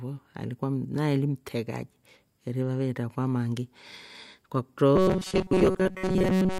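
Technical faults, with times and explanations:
4.96 to 6.60 s: robotic sound from repeated short buffers. The speech becomes a rigid metallic buzz at 188 Hz, loosely tracking the words. Likely, a starved stream kept replaying a slice of about 5.3 ms, covering most of the real audio.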